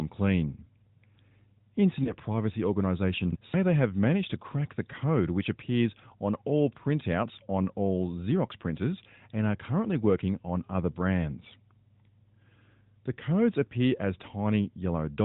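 Around 2.04 to 2.16 s there's a lost AMR speech frame: one 20 ms frame failed its check, so the narrowband decoder patched the gap with the previous frame's pitch and tract settings at reduced gain. You hear a quick dip or warble before the speech settles back.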